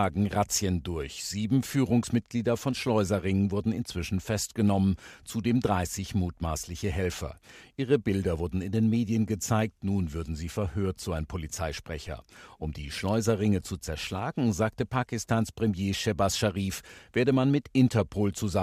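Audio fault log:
12.07 s, DC step: the zero line jumps by about -40 dBFS, then eases back as a 5 Hz high-pass drains the offset, giving a low thump under the speech. The waveform shows a shifted baseline settling back, the spectrogram a low-heavy tick.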